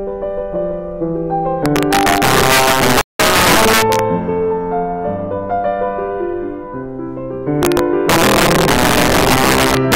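From 1.66 s the loud passages start cracking hard. That's integer overflow: the signal is being pushed about 8 dB past full scale, and instead of being held at the limit, every peak that crosses it wraps around to the opposite sign. You don't get the flattened fuzz of clipping. Each overshoot is a violent full-range snap, much harsher and spikier. It keeps going right through to 3.99 s.

Inside that stretch, at 3.01 s, the output simply drops to silence for about 183 ms, until 3.20 s. That's a playback stall. The sound cuts off mid-flow and then resumes, and the likely cause is the player running dry of data or its thread getting blocked for that moment.

Straight after, from 3.20 to 3.56 s, there's catch-up at higher speed. The player runs its backlog through at 1.5 times normal speed by resampling, so everything rushes and jumps up by around seven semitones, roughly a fifth, before it snaps back to normal speed and pitch once the lost time has been made up.

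At 7.63 s the integer overflow comes back with the same roughly 8 dB overdrive, and those sharp wrap-around cracks on every loud peak carry on to the very end of the clip.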